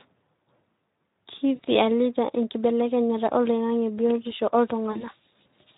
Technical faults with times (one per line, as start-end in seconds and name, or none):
0.00-5.77 Speex codec
1.55-1.60 VoIP packet loss concealed by the speech codec
4.92-5.06 VoIP packet loss concealed by the speech codec